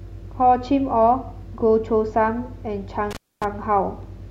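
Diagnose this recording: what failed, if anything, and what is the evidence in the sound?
An intermittent contact in the analogue wiring interrupts the speech from 3.11 to 3.44 s. The signal drops out for about 0.25 s, with crackle at both edges and faint hiss underneath. A loose cable or plug briefly lost its connection and then reseated.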